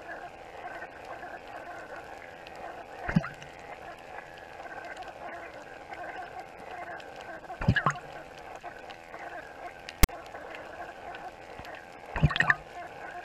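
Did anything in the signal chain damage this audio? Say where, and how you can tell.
Yes. From 10.03 to 10.09 s a hard-edged burst cuts in: a rasp offset to one side, then silence. This is file tags played as audio, a storage or playback fault in which a block of text tags and its zero padding was read as samples.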